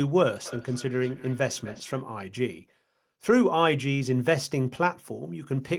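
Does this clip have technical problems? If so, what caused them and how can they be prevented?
Yes: from 0.46 to 2.08 s the speech returns in thin, ringing repeats about a third of a second apart, peaking about 18 dB below the speech. This is feedback echo between two devices: two devices on the same call in one room, each replaying what the other's microphone picks up, which its own echo canceller cannot remove. Prevent it by muting or leaving the call on all but one device in the room, or by using headphones.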